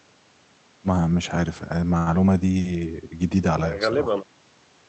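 At 1.97 to 2.09 s the speech holds one sound about 96 ms too long, with a faint buzz, then resumes where it left off. This is a short stall from a late packet: the jitter buffer ran dry, so the receiver stretched the last audio until the packet arrived. Nothing is lost, but everything after it is shifted 96 ms later. The call codec's cutoff near 8 kHz fits Opus on a wideband setting.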